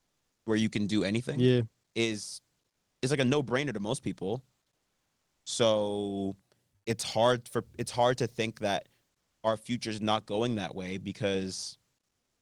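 Right from the start, 0.0 to 0.46 s, the room tone before "where you can do" is swapped for comfort noise in place of the background. It's a flat, featureless hiss about 14 dB quieter than what follows, likely Opus DTX filling in while the sender's voice detector judged there was no speech. The same smooth fill returns between "do anything yeah is" and "is like a" at 2.70 to 3.02 s, about 6 dB down, and briefly at 6.76 to 6.86 s, only about 3 dB down.

Overlapping the end of that first gap, from 0.40 to 0.46 s, there's an onset clipped by the voice detector. The detector was late to notice sound coming back, so the first 60 ms of "where you can do" went missing and comfort noise covered them. The word snaps in hard with no soft lead-in, likely from the same DTX gating. Underneath it all, the call path's top end stops around 12 kHz, which fits Opus at about 32 kbps.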